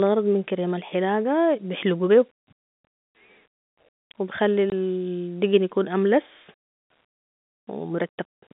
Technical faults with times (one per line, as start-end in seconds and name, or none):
4.70 packet loss filled with silence